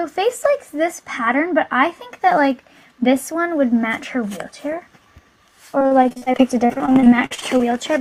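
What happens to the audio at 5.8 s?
At 5.79 s repeated packet loss sets in and lasts until 7.62 s. About two dozen short holes, none longer than 45 ms, are patched by stretching the preceding sound, so the audio turns choppy and robotic. Spectrograms show smeared, repeated frames and dropouts.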